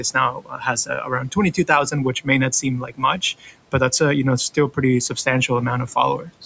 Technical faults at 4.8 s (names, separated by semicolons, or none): noise suppressor artifacts